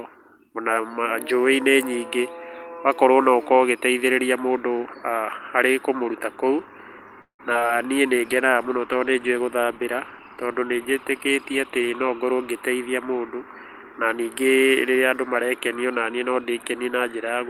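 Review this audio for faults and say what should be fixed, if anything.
From 7.21 to 7.71 s there is repeated packet loss with a robotic sound. Four gaps are patched by extending the previous sound, the longest about 175 ms. Nearly half the span is concealed, so the speech turns choppy and robotic. A larger jitter buffer and forward error correction would prevent it.

A call bitrate drop runs from 8.09 to 12.07 s. The encoder falls from 32 to 16 kbps for almost four seconds. Coarser coding and lost high frequencies make the speech rough and muffled. Better bandwidth headroom or faster rate recovery would prevent it.

From 11.81 to 13.20 s a jitter buffer speed-up is audible. The receiver trims short pitch-period pieces, roughly a tenth of a second in total. Speech runs about 7% fast at the same pitch and sounds hurried. Smoother packet delivery would avoid the catch-up.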